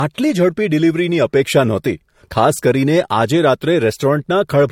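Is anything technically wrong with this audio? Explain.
Yes. Throughout the speech there are signs of transcoding between lossy codecs. Nothing sounds above about 16.6 kHz, and two kinds of artefact are layered: smeared, watery AAC-style textures under MP3-style swirling and pre-echo. That points to likely re-encoding of a low-bitrate AAC file to MP3. A single lossy encode would show only one codec's signature.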